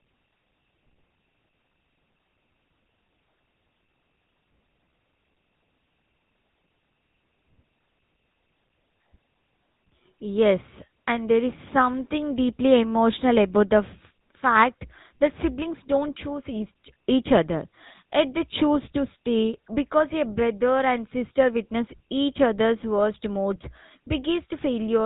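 GSM full-rate coding runs through the whole speech clip. The codec models the vocal tract and excites it with sparse, regularly spaced pulses, so the voice turns plainly buzzy and gravelly, with nothing above 4 kHz. The damage fits roughly 13 kbps.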